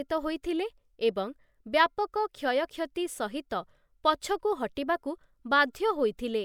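No technical faults are audible.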